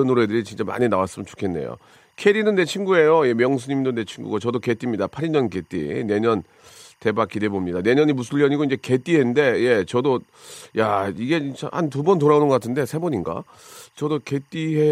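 From start to finish, a faint chirping warble runs beneath the speech: timecode bleed, where linear timecode from an adjacent track or cable has leaked into the audio path. The code's square wave flips between tones near 1 kHz and 2 kHz, sitting roughly 45 dB under the speech, and its steady rhythm fits 24-frame code. A spectrogram shows constant horizontal bands near 1 kHz and 2 kHz, with odd harmonics above, that persist through pauses where the waveform otherwise flattens.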